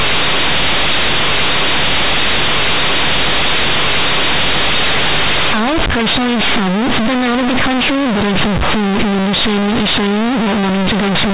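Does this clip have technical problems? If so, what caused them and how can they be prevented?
Yes. Throughout the speech there is companded audio read as linear. The loud, buzzy distortion and strong noise in pauses fit mu-law G.711 bytes being played as plain 8-bit samples without expansion, so each sign change swings about half the output range and quiet passages become as loud as peaks. To prevent it, tag the stream as mu-law and expand it to linear PCM before playback.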